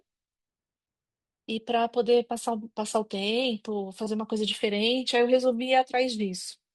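No technical faults are audible anywhere in this recording.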